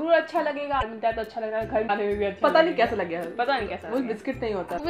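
At 0.80 s, 1.87 s and 4.77 s the sound skips forward and each join is covered by a garbled fragment about 30 ms long. The likely cause is a broken MP3 bit reservoir. Frames were lost, so the frame after each gap reached back for data it had stored in earlier frames and decoded bytes belonging to other frames instead. A plain dropout would leave a clean gap and resume in place. Here the damage spans roughly one 26 ms frame, and the audio lands further along than where it left off.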